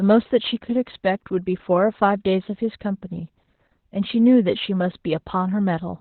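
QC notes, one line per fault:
Throughout: Opus voice compression, heavy. Speech is confined to a band ending near 4 kHz and sounds muffled, hoarse and slightly robotic. That fits the SILK linear-prediction coder in narrowband mode at around 8 kbps, coarsely coding the excitation in 20 ms frames.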